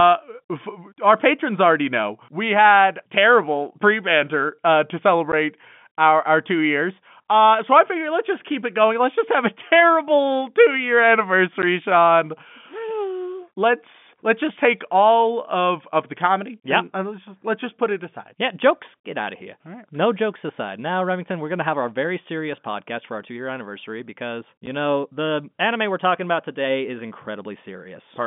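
At 5.32 s, just after "pre banter uh to", the speech drops out abruptly for 10 ms. The same gap recurs at 11.62 s and at 24.66 s, the last falling between "two year anniversary because" and "know the anime we're". These are packet loss filled with silence: each hole fits a single lost 10 ms packet, replaced by digital silence rather than concealed. Each hole has hard edges, cutting through the band-limited G.711 telephone sound.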